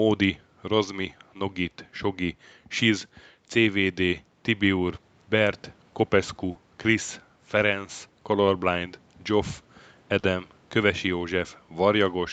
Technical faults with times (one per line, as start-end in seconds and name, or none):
6.51-6.57 short concealed packet loss
10.19-10.25 short concealed packet loss